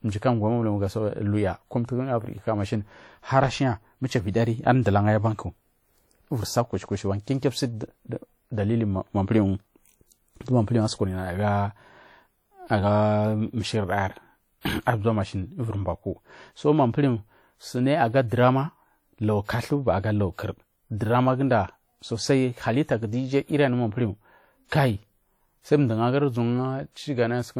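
WMA compression is plainly audible for the whole speech clip, with a ringing, washy quality and a hiss that swells and fades with the signal, likely from a transform encoder running long blocks at a rate that fits about 48 kbps. Content still reaches 20.1 kHz.

Pre-echo appears from 14.61 to 14.65 s, just before "ar bza", and again from 24.68 to 24.72 s, just after "anu manpuhu". Each time, quantisation noise from a loud attack spills back about 34 to 41 ms into the quiet before it, so a brief hiss precedes a softened onset.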